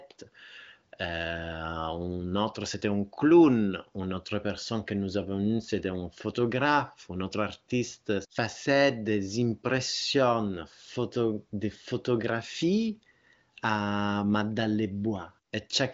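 Nothing stood out on listening to this speech, which has the narrowed top end of an HD Voice (AMR wideband) call, with nothing above 7.5 kHz.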